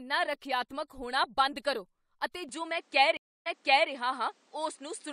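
At 2.49 s, right after "ਹੋਣਾ ਬੰਦ ਕਰੋ ਅਤੇ", the speech abruptly turns duller and shifts in level by around 5 dB, with no gap at the join. A new noise floor sits roughly 40 dB below the speech. On a spectrogram, energy above 9.8 kHz disappears from this point to the end, leaving a sharp ceiling. This is likely an input switched to a poorer device, which passes a narrower band and brings its own tone, gain and background hiss.

From 3.17 to 3.90 s there is a stream reconnect. The player lost its connection, fell silent for 287 ms, and restarted decoding at a point 441 ms earlier than where it stopped, so a stretch of the speech is heard again. A waveform shows a flat gap, then the envelope of material already played, repeated. A fresh decoder start like this can briefly mute or fade the first frame or two after the gap.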